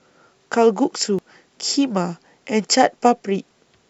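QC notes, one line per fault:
1.19 s and 3.51 s: compressed frames skipped. The speech jumps forward by about a tenth of a second each time, which fits one whole frame of roughly 93 ms going missing.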